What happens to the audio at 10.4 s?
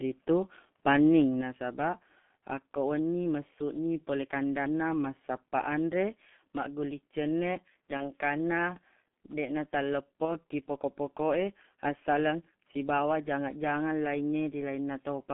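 Around 10.25 s the call dropped a packet, one 30 ms frame of speech, and the G.723.1 decoder filled the gap by carrying its last pitch and filter settings forward at reduced gain. You hear that stretch as a smeared stand-in, a buzzy tone or coloured noise that fades. Because each decoded frame depends on the previous one, the speech stays weakened or distorted until about 10.37 s, so the effect of this VoIP packet loss concealed by the speech codec outlasts the missing 30 ms.

Underneath, and throughout the clip, is the G.723.1 codec itself, running at 6.3 kbit/s over a line band of roughly 150 Hz to 3.4 kHz. Everything above that band is gone, and the codec's slow 30 ms updates of its voice model leave the speech muffled and hoarse, with blurred consonants. The damage from this codec is heavy here.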